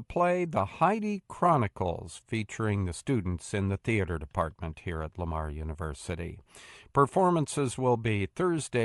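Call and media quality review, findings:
Bluetooth LC3 compression, whole clip, 0 to end. Speech carries a plainly audible breathy, grainy edge. Likely cause: LE Audio LC3 link, upper bins zeroed, then noise-filled. Damage level fits roughly a 48 kbps stream with 10 ms frames. Unlike a clean low-pass, the top band is replaced by hiss rather than removed.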